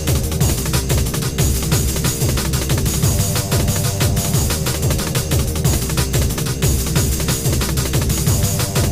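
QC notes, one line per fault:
Nothing to flag here, no faults turned up anywhere in the clip.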